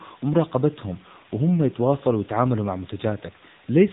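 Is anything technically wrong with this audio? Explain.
Yes. Throughout, the speech carries AMR narrowband mobile codec damage. Nothing above 3.8 kHz survives, and the vocal-tract model rebuilds each 5 ms from a few pulses, giving a plainly buzzy, synthetic edge that fits a low rate around 8 kbps.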